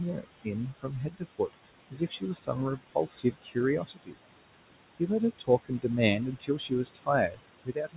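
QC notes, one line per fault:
Throughout: noise suppressor artifacts. The suppressor pulls down every band it judges to be steady noise by about 21 dB, so the room noise, about 12 dB below speech, sinks between phrases and swells back under them.
0.13–1.55 s, 1.91–4.19 s, 5.39–7.97 s: speech cut by the noise suppressor. The suppressor mistakes quiet speech for noise and ducks it by up to about 20–22 dB, affecting roughly half a second, then about a second, so soft consonants and endings sound swallowed or faint, made duller by the 4 kHz ceiling of the narrowband call path, consistent with G.711 A-law.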